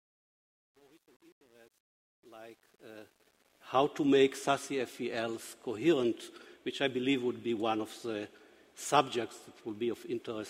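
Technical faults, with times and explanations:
0.0–3.85 s, truncation distortion on the fade-in: the quiet start sounds gritty until about 3.32 s, which fits an undithered stage keeping roughly 9 bits.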